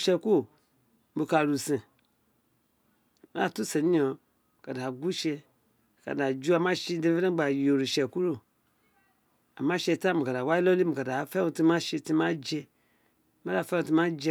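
Just a speech recording, and there's nothing technically wrong with it that the ear can pick out anywhere along the way.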